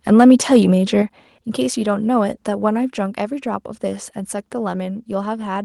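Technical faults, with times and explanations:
1.02 s, microphone volume stepped down: the speech and the background beneath it fall together by about 6 dB in a single instant and stay at the lower level, with no gradual slide. The cause is likely the call software judging the microphone input too hot and cutting the device's input volume in one step. Because the drop is a clean step rather than a smooth ramp, it is distinct from automatic gain control, and the background shrinking by the same amount rules out the speaker simply talking more quietly.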